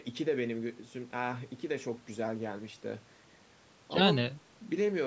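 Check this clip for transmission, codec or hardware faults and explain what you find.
No transmission, codec or hardware faults can be heard.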